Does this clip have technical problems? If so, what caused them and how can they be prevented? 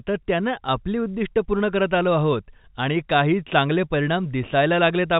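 No, nothing in this speech clip points to a technical problem. It carries the narrow sound of G.711 telephone coding, with nothing above 4 kHz and at most a faint noise that follows the level of the speech, as expected from a 64 kbps mu-law telephone path.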